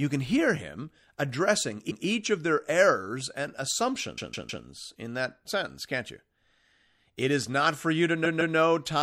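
A speech recording with plainly audible MP3 compression throughout, likely from a low bitrate around 64 kbps. The weak detail flickers from frame to frame, giving a watery, swirly texture with chirpy sibilants and smeared consonant onsets. Unlike plain band-limiting or noise, the damage keeps shifting with the sound. Repeated frames cause three stutters, each replaying the same 157 ms block, which fits six MP3 frames. The first, at 1.90 to 2.05 s, comes after "can hear him addressing" and before "of their errors and" and plays once extra. The second, at 4.17 to 4.64 s, just before "in that sentence can't", plays three times extra. The third, at 8.24 to 8.56 s, plays twice extra. What separates this from a dropout or skip is that nothing is lost. The identical fragment recurs and the clip grows longer by the replayed time.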